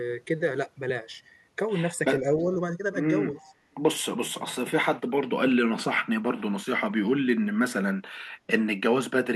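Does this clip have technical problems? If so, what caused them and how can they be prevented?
Yes. A loudspeaker on the far end likely let its echo canceller miss part of what its microphone picked up, so an echo leak came back to this side as a delayed copy of the speech, about 317 ms behind. A faint scrap appears at 2.39 to 2.44 s, roughly 40 dB down, and a clearer stretch at 3.34 to 3.55 s, around 25 dB below the speech. A headset, or a canceller with a longer tail and better loudspeaker-to-microphone isolation, would prevent it.

Around 3.38 to 3.49 s both sides were likely talking, and the echo canceller likely could not separate the near talker from the returning echo, so it turned everything down. This is speech suppressed in double talk: the speech dips by roughly 10 dB at its deepest, for about a tenth of a second in total, overlapping the stronger echo burst. Better double-talk detection, or removing the echo at its source with a headset, would keep the talker from being ducked.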